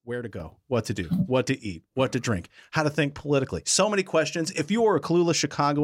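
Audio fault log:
0.4 s to the end, sudden gain jump: just after "where to" the level steps up by about 8 dB in an instant and stays there. The background noise rises by the same amount at the same moment, so the whole signal has been scaled, not just the talker. The likely cause is a digital gain setting applied without a ramp. An automatic gain control or fade would instead rise over a noticeable stretch and tend to pump back down.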